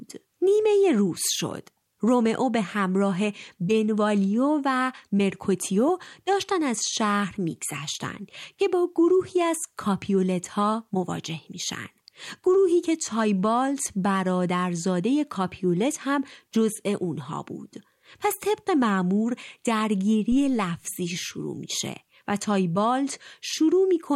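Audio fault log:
20.32–20.74 s, phantom power thump: a deep, low-frequency thump peaking at about -24 dBFS and decaying over roughly 93 ms. A supply switched on or off on the live input sends a voltage step through the coupling capacitors, which is heard as this brief bass pulse.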